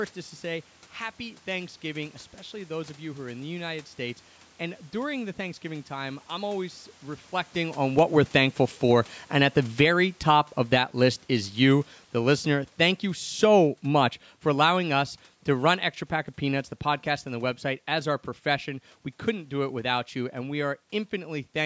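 From 7.89 to 20.79 s the automatic gain is falling: judging the input too loud or its background noise too strong, it sinks speech and room noise together by about 13 dB.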